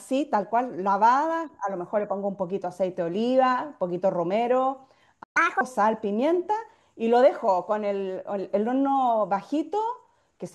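At 5.23 s the speech halts mid-flow in a playback stall, falling silent until 5.37 s, likely because the player's buffer ran dry or its thread was blocked. Unlike a dropout, no audio is lost: the speech resumes exactly where it stopped.

From 5.37 to 5.61 s comes catch-up at higher speed. The player rushes through its backlog at 1.5 times normal speed, so the voice both quickens and rises by roughly seven semitones. Unlike a steady pitch fault, both speed and pitch snap back to normal once the lost time is recovered.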